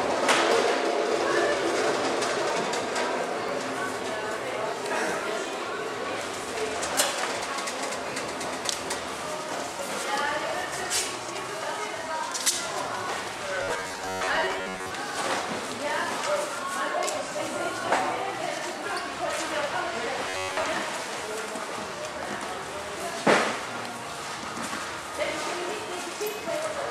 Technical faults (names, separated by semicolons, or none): overlap between stream segments; robotic sound from repeated short buffers